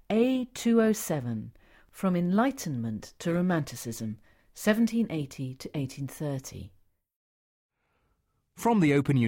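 From about 3.27 to 4.90 s there's periodic clock jitter: something is wobbling the converter's sample clock at a steady rate of around 2 kHz, so every part of the speech picks up sidebands spaced roughly 2 kHz either side of it. The higher-frequency parts of the speech get hit hardest, which gives that stretch a gritty, slightly metallic edge that rides on the voice and drops away wherever the sound goes quiet.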